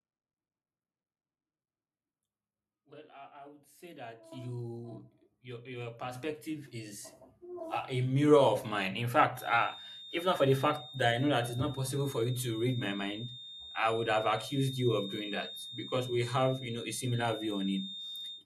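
Microphone volume stepped up at 4.32 s, 6.15 s and 7.17 s: the speech and the background noise jump together by about 10 dB, then about 6 dB, then about 4 dB. The call software judged the microphone too quiet and raised the device's input volume in single steps, so each change is instant rather than faded. The shrinking step sizes suggest the software correcting toward a target, and everything stays at the higher level after each step.

Feedback whistle from 9.32 s to the end: a thin, steady tone at 3.7 kHz sits roughly 15 dB below the speech and swells and fades slowly in level. This is likely the loudspeaker-to-microphone loop sitting right at the edge of feedback. At that one frequency the loop gain is just high enough to keep the tone ringing, but not enough for it to build into a howl.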